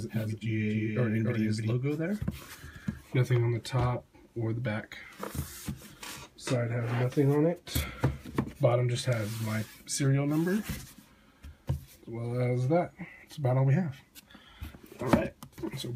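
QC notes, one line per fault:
0.00–1.72 s, doubled audio track: already running when the clip opens, a second full-band copy trails the original by roughly a third of a second, a few dB down, with no decay or room colour, then drops out abruptly. Likely a slower second capture path summed in.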